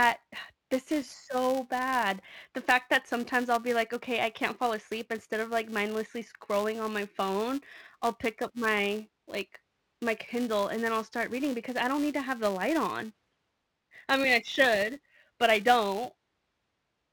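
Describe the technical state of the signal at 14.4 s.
At 14.4 s the filter is restarted on every block, as throughout the clip. Each block, which fits a 128-sample length, starts from silence, producing a 345 Hz buzz that tracks the speech level.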